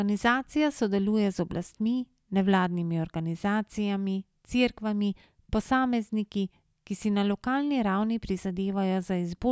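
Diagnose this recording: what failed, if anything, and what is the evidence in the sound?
Nothing in the signal chain has failed: the speech recording shows no audible fault at any stage.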